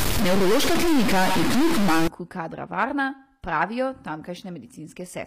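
From the start to about 2.08 s, just before "kadra varna pravijo", the speech carries a distortion, and the gaps between sounds fill with a noise floor instead of falling quiet. This is a stuck bit, likely one data bit held at a fixed value by a faulty line or converter. Roughly half of the samples land off by that bit's weight, following the waveform, and the bit also changes with the sign of small values near silence, which produces the noise in the pauses.

Throughout the clip the treble sounds synthetic. Sibilants come across gritty and metallic, and nothing is present above about 15.4 kHz. This is HE-AAC compression, likely HE-AAC v2 at a low rate that fits roughly 24 kbps. Only the lower spectrum is actually coded. The upper band is rebuilt by copying lower bands upward under a coarse envelope, so its harmonics fail to line up with the real ones across the crossover.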